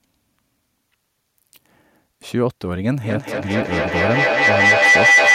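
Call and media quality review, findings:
Rising tonal whistle near 2 kHz from 3.04 s to end of clip, pulsing about every 200 ms, peaking about 9 dB over speech. Feedback howl: two devices sharing one room, mic-to-speaker loop gaining level each pass, at the loop's delay.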